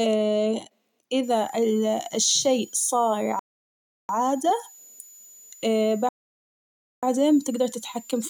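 A switching supply whistle enters at 1.23 s and continues to the end of the speech: a thin, high tone around 7 kHz, wandering between 6.87 and 7.12 kHz, sitting roughly 25 dB below the speech. A switch-mode power supply has dropped its switching frequency into the audible band, likely through burst-mode operation, and that ripple is leaking into the audio path.

A rebuffering stall cuts the speech to silence from 3.39 s to 4.09 s, adding 0.70 s, and a second stall follows from 6.09 s to 7.03 s, adding 0.94 s. Each time, playback ran out of downloaded data and waited for more. The speech then resumes exactly where it stopped, with nothing lost.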